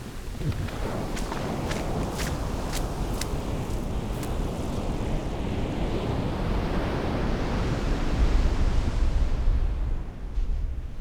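Listening through this recording of everyday sounds, nothing stood out as a technical problem at any point.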